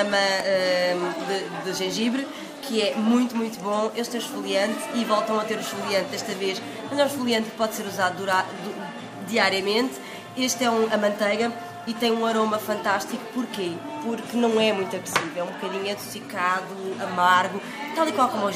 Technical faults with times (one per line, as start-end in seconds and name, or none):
none